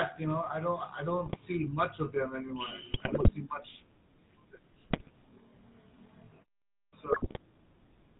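Throughout, the speech has a buzzy, gravelly roughness with nothing above 4 kHz. That is the GSM full-rate codec, which fits a 13 kbps GSM full-rate link. It rebuilds the voice from a vocal-tract model driven by sparse, regularly spaced excitation pulses.

From 1.26 to 1.37 s, between "know I don't I" and "much of them", the voice breaks into a squawking, gargling burst. Similar bursts follow at 2.92 to 3.31 s, just before "see much", and at 4.88 to 5.10 s. These are GSM bit errors: corrupted filter, pitch or gain values reach the decoder and distort the spectrum or level for each hit frame.

At 6.74 s, after a 0.38 s pause, the speech starts abruptly with its opening sound missing. This clipped start after a pause loses about 188 ms while the output wakes.

A final burst of GSM bit errors garbles 7.12 to 7.39 s.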